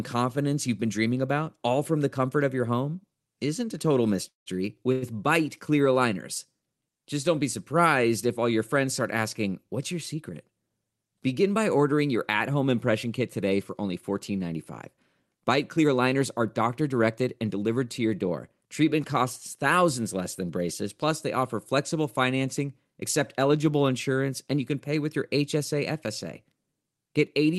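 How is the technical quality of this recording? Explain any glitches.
The recording has two kinds of glitch: two brief freezes early on, and three stretches where the speech is hurried along. Its top end stops at about 12 kHz, which fits Opus coding at a moderate bitrate.

The call audio freezes come at 4.28–4.48 s and 4.92–5.04 s. The likely cause is delayed packets emptying the jitter buffer, so the receiver stretched the last sound into a fading buzz. The first freeze lasts about 180 ms, and 150 ms of that decays to silence. The second is a 100 ms smear with no silence. Unlike a dropout, nothing is lost: the speech resumes exactly where it stopped, only later.

The jitter buffer speed-ups run from 10.22 to 10.71 s at 110% speed, from 15.40 to 17.69 s at 107% just before "to your door", and from 22.85 to 23.50 s at 105% between "they offer flexible financing" and "insurance and you can". 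With surplus audio queued, the receiver trimmed pitch-period slices, removing roughly 50 ms, 200 ms and 40 ms. The pitch stays put while the pace rushes, which separates this from resampling, where pitch would rise.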